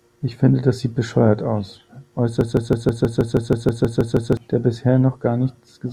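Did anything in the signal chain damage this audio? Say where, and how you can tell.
Yes. From 2.41 s to 4.37 s the speech sticks on one fragment about 160 ms long and repeats it exactly, back to back, twelve times, like a skipping record, before normal speech resumes. This broken-record loop is likely a stall in the player or stream buffer: with no fresh data arriving, it kept replaying the last fragment it held. The speech that belonged in those two seconds is missing, not merely delayed.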